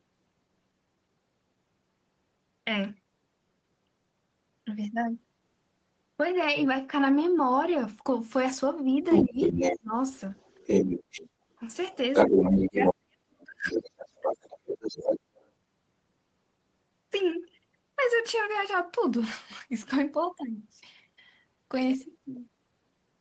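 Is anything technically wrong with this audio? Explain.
Yes, this speech has two related faults between about 9 and 15.5 s.

Other side's voice leaking through: a second voice appears under the talker at 9.09–9.79 s, 10.1–11.29 s, 12.13–12.94 s and 13.64–15.5 s. It is loud, roughly matching or a few decibels above the main speech in the first three stretches and a little below it in the last. The likely cause is the far-end voice playing from the loudspeaker and being picked up by the microphone, with the echo canceller failing to remove it.

Speech suppressed in double talk: while the far side is also talking, the talker's own speech dips or drops out at 9.23–9.41 s, 9.78–9.94 s, 12.29–13.85 s and 14.12–14.27 s. The drops range from a moderate dip to near silence. The deepest and longest runs through most of 12.3–13.9 s. The likely cause is the echo canceller being unable to separate the local talker from the echo while both sides speak, and turning both down together.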